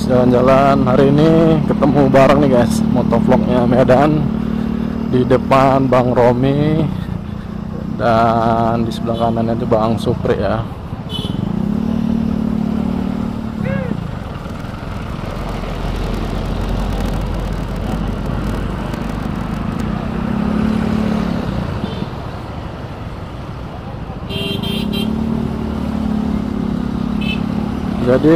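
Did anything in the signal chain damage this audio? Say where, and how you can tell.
Yes. A block size mismatch (padded) at the driver or buffer stage runs from 14.19 to 19.82 s. A steady 38.3 Hz buzz appears and the audio slows to 0.889 times normal speed with its timbre unchanged, which fits 1024-sample blocks zero-padded to fill larger reads.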